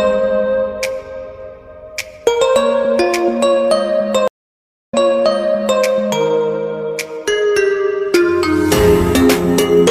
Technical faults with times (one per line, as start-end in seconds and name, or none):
4.28-5.82 stream reconnect